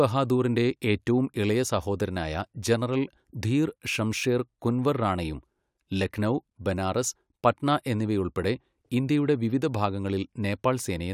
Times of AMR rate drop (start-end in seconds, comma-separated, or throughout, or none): none